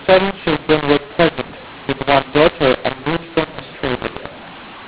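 From start to finish the speech is harsh, crackly and grainy, with a hiss that never drops out in the pauses. This is mu-law and A-law mixed up: the audio was coded with A-law but decoded as mu-law, so every 8-bit code maps to the wrong level. Loud and soft samples come out scrambled, and near-silent samples are lifted well above zero. On the waveform the gaps between phrases show a raised noise floor, and the peaks look jagged and uneven. On the spectrogram broadband distortion fills the whole band up to the 4 kHz ceiling that the 8 kHz telephone coding sets.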